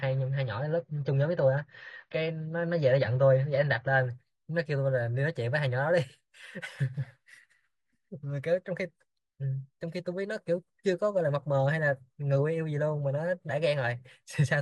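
From 0 to 4.0 s the speech is dull, nothing above 7 kHz, artefacts stronger: an adaptive stream starting at a low bitrate. Then quality jumps, no gap.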